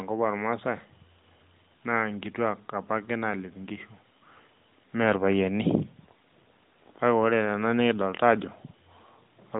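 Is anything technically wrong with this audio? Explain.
No, nothing in this speech stood out as a technical problem on listening.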